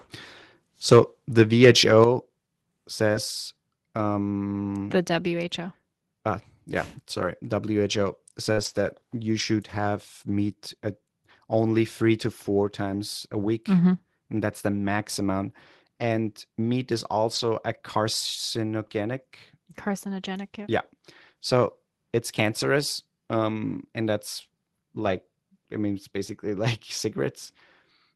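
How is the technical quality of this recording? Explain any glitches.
The recording has a handful of real glitches: a clipped peak near the start, a level drop right after it, and a string of network-loss artefacts scattered through the speech. Underneath all that it sounds like an Opus call stream at roughly 24 kbps, with the top end cut off at 12 kHz.

Microphone overload, 0.91 to 0.99 s. The loudest moment here goes about 5 dB past full scale, so a good chunk of the waveform tops get flattened. The likely cause is the mic input gain being set too hot, which drives the converter into its ceiling. You hear it as a short, harsh crackle riding on that peak instead of a clean loud syllable.

Microphone volume stepped down, at 2.04 s. About a second after that clipped peak, the whole level drops by about 5 dB in one go. Voice and background fall together, so it's a gain change rather than the speaker backing off. 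It's likely the call software's automatic gain logic reacting to the overload and knocking the device input down a notch. It sounds like a sudden dip in loudness.

Short concealed packet loss, 3.11 to 3.15 s. About 20 ms of audio didn't arrive in time, and the receiver bridged the hole by extending whatever sound came just before, then crossfading back into the real signal. It's brief enough that it comes across as a tiny smear or wobble rather than a dropout, and the tail of it is covered by the error-correction copy described next.

Lost packet rebuilt from error correction. This happens at 3.13 s, from 7.17 to 7.27 s, from 8.57 to 8.91 s, from 9.39 to 9.45 s just before "have meat at only", from 12.85 to 12.95 s, from 17.35 to 17.41 s right after "meat is", and at 25.05 s after "and that's". In each spot the original packets were lost, and the decoder played the low-bitrate backup copy tucked into the following packet. 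There's no gap, but those stretches sound grainier and noisier for between 20 and 180 ms.

Burst of packet loss, 8.53 to 8.59 s. A run of about 40 ms went missing. The receiver stretched the last sound across the hole for roughly 45 ms, fading it as it went, so you get a held buzz or hiss instead of the real content. Playback then picks up further along, and that recovery leads straight into the longest stretch of error-corrected audio, which runs to 8.91 s.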